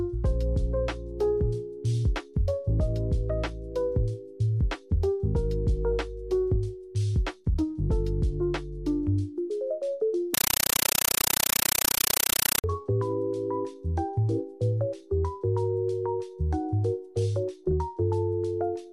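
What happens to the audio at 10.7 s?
A compressed stream played as audio takes over from 10.34 to 12.64 s, so 10.7 s falls inside it. An AC-3 (Dolby Digital) bitstream, which fits a 384 kbps stream, is being passed through as if it were ordinary PCM samples instead of being decoded. Each frame becomes an 8.0 ms blast of noise followed by silent padding, repeating at 31.25 Hz, heard as very loud, chattering static that replaces the sound.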